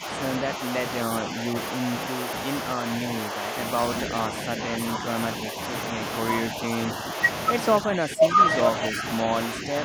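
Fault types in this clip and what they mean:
Speech suppressed in double talk: in four stretches, the speech dips by about 5 dB in brief patches, and by about 10 dB near the end, likely because an echo canceller turned the talker down during double talk. The waveform shows envelope dips; the spectrogram shows faded columns.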